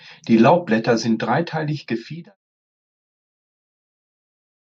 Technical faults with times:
none

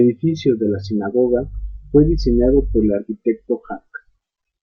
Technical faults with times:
none

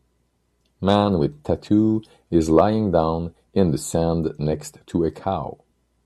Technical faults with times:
none

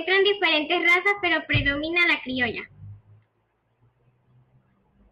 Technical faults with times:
none

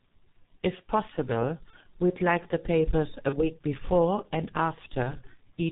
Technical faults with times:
0.00-5.72 G.723.1 codec
1.70-1.75 VoIP packet loss concealed by the speech codec
3.29-3.39 VoIP packet loss concealed by the speech codec

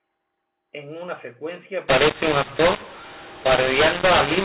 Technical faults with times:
1.88-4.45 mu-law and A-law mixed up

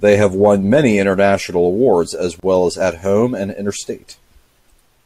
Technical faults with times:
2.40-2.43 gap at a join of encoded pieces

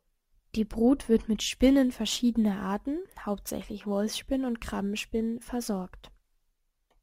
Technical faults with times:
1.58-7.03 crude rate conversion

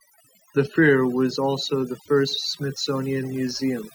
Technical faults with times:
0.00-3.94 overdone noise removal

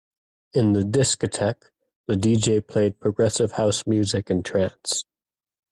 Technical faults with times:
none

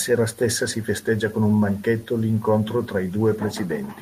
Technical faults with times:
none

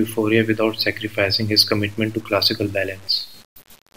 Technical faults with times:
0.00-3.96 low bit depth without dither

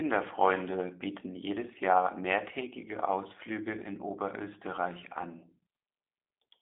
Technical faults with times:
0.00-6.61 G.729 codec

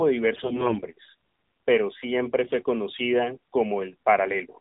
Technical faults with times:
0.00-4.61 AMR narrowband mobile codec
0.36-0.82 AMR bit errors

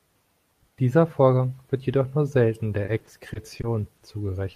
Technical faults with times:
2.85-4.02 repeated packet loss (robotic sound)

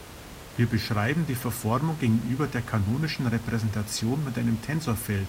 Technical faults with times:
none

